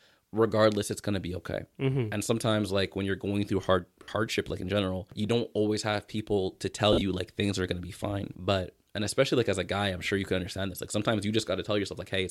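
Lost LE Audio frames at 4.03 s (50 ms) and 6.93 s (60 ms across 80 ms, the longest gap around 50 ms) made the LC3 decoder repeat the last spectrum with randomised signs, so the speech briefly smears into a noisy hiss.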